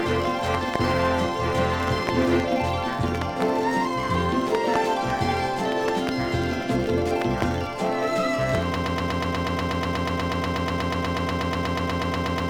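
From 8.76 s to the end, the audio locks into a tight stutter: a fragment about 0.12 s long plays back to back, identical each time, some 31 times, giving a rapid rhythm instead of moving on. This is a broken-record loop. The likely cause is the player, encoder or stream stalling and resending the last chunk it still held, so whatever should have followed 8.76 s never arrives.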